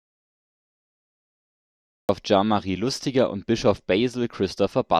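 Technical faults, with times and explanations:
0.00–2.09 s, audio dropout to silence: the clip opens in silence, with no room tone or hiss, and speech cuts in abruptly at 2.09 s. Unlike a natural pause or a noise gate, nothing remains underneath, so the input was likely lost while recording continued.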